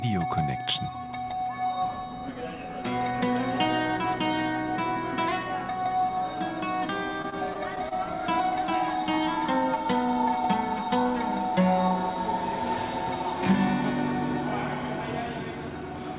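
Audio carried over a narrowband call path, with nothing above 4 kHz, which fits G.711 mu-law at 64 kbps. From 7.22 to 7.93 s, repeated packet loss gives a choppy, robotic stretch: five short gaps, the longest 21 ms, are patched by extending the preceding sound, covering about 13% of that span.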